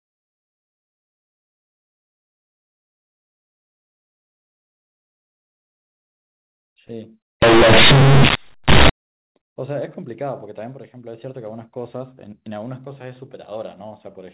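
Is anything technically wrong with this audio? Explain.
Yes. From 7.42 to 8.89 s, companded audio is read as linear: the mu-law telephone bytes, which are normal G.711 coding elsewhere with its 4 kHz ceiling, are played out as plain 8-bit samples without being expanded. Because the logarithmic code is treated as a straight value, every change of sign throws the output across about half its range. Quiet and loud passages end up equally large, and the speech turns into a very loud, buzzy distortion with strong noise in the pauses.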